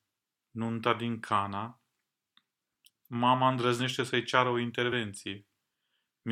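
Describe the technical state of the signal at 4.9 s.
At 4.91 s the speech lurches forward, jumping ahead past the missing audio. This is compressed frames skipped: a couple of frames, about 50 ms of audio, never get decoded, so playback resumes that much later in the speech.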